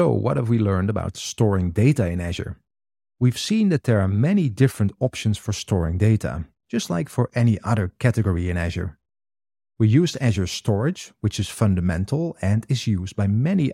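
No technical faults are audible anywhere in the recording.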